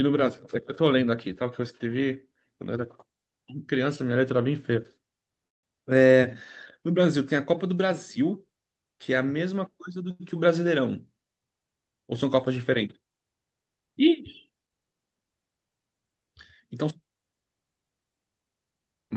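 A call audio freeze runs from 5.47 to 5.65 s: the speech stops and is replaced by a brief fill that fades almost at once, leaving about 150 ms of near silence before the talker resumes exactly where they left off. Nothing is lost; the gap adds 158 ms of delay. The likely cause is packets held up in transit, letting the jitter buffer run dry until the stream caught up.

A short stall from a late packet follows at 10.11 to 10.22 s. One packet missed its playout time, so the receiver stretched the last sound for 89 ms until it arrived, then continued from the same point. The result is a held prolongation with a slight buzz or dip rather than a gap, with no speech dropped and 89 ms of extra delay.

Jitter buffer speed-up appears twice, from 13.85 to 14.71 s and from 18.53 to 19.10 s. Having built up more buffered audio than it targets, the receiver trimmed short pitch-period slices repeatedly to shed the excess, roughly 70 ms in the first stretch and roughly 150 ms in the second. 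Pitch stays put while pace rises, to 108% and then 122%, so the closing stretch sounds noticeably hurried. Through all of this the Opus codec's band limit is audible as a top end that stops at 8 kHz, which fits a moderate bitrate around 32 kbps.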